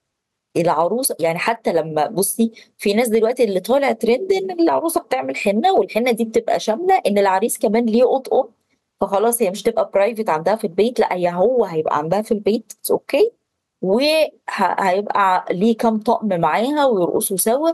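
Gain pumping runs through the whole speech clip. The gain swings by around 10 dB, squashing the dynamics. The likely cause is an overdriven input hitting a fast limiter.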